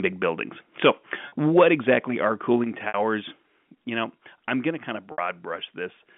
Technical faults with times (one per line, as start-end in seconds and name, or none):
0.85-0.90 microphone overload
1.28-1.32 packet loss with pitch repetition
1.57-1.91 microphone overload
1.63 microphone volume stepped down
2.64 microphone volume stepped down
2.88-2.94 packet loss with pitch repetition
3.66 microphone volume stepped down
5.12-5.18 packet loss with pitch repetition